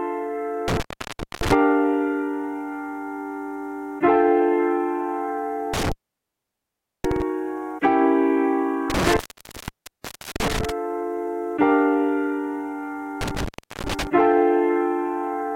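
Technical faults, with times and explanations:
0.68–1.53 s, 5.74–7.22 s, 8.90–10.70 s, 13.21–14.07 s: intermittent contact. A loose plug or cable connection breaks and remakes, dropping the signal for about 0.61, 1.13, 1.21 and 0.39 s. Crackle marks each break and reconnection, and faint hiss fills the gaps.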